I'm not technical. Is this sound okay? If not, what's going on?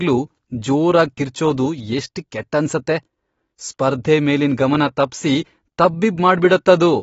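No. From start to finish the speech sounds dull and muffled, as if heard through a cloth, with a plainly audible watery, fizzy swirl on hissy sounds like s and sh. Nothing in the sound reaches above 7.6 kHz, so the crisp top end is missing. The likely cause is AAC compression squeezed too hard. To save space, the encoder discarded the highest sounds and roughly approximated the detail it kept, leaving that smeared, warbly texture.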